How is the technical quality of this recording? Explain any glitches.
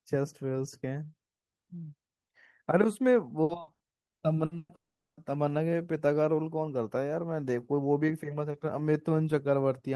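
The recording has two connected network faults in the middle of the speech, between about 3.4 and 5.2 s.

From 3.43 to 4.72 s there is repeated packet loss, heard as robotic sound. Seven short breaks, the longest 120 ms, leave 480 ms of audio missing. The receiver patches each hole by stretching the previous sound, so 37% of that span is concealment. The result is choppy. Unlike a single dropout, the audio keeps resuming between holes.

From 4.75 to 5.20 s there is a long network dropout, likely from a stall in delivery. About 420 ms never arrives. The last sound is carried on briefly as a fading buzz or hiss, then about 410 ms of near silence follows before the speech returns with that section gone. What separates it from the robotic stretch before it is one continuous hole instead of rapid breaks.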